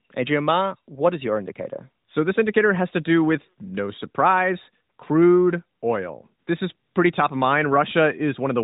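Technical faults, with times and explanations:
No technical faults are present in this clip.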